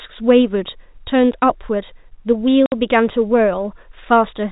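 A speech recording carried over a G.711 telephone path, so everything above 4 kHz is gone, and it has one clear case of packet loss filled with silence. At 2.66 s the audio drops out completely for 60 ms, through 2.72 s, with hard edges going in and coming out. That length fits three consecutive 20 ms packets going missing, with the receiver playing plain silence in their place instead of concealing the gap.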